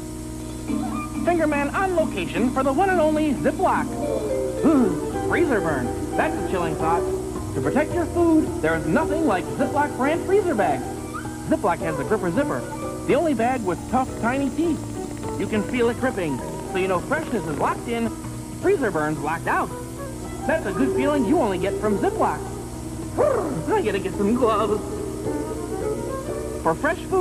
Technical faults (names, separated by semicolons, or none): drift correction step